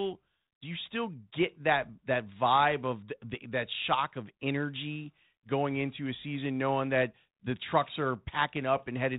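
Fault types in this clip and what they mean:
No faults can be heard in this speech clip. It passes through a G.726 telephone path at 32 kbit/s, so nothing above 4 kHz comes through and there is only a light coding grain that follows the level of the speech.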